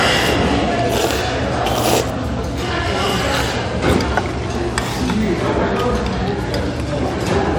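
Nothing stood out on listening to these sounds.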